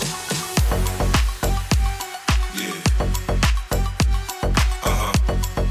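No technical faults can be heard anywhere in the clip. Nothing interrupts or disturbs the sound at any point.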